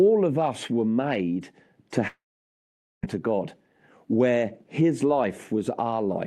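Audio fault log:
2.07–3.05 s, long network dropout: right after "us were made to", the last sound is drawn out as a brief buzz or hiss that fades, then about 0.85 s of silence follows before the audio resumes. This is likely a stream interruption in which about 0.96 s of audio never arrived. Unlike a short packet-loss glitch, the concealment gives up and falls silent, and playback resumes further on with that stretch missing instead of picking up where it stopped.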